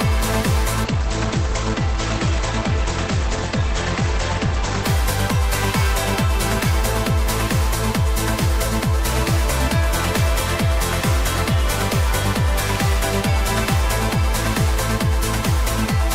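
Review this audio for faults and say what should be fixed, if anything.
Adaptive stream at a lower bitrate, 0.84 to 4.84 s: the connection slowed, so quality drops abruptly without a gap, treble vanishing above 8.5 kHz, consistent with a step from about 64 to 16 kbit/s. Preventing this needs a larger playback buffer or steadier bandwidth so the player never falls back to the lower-bitrate version.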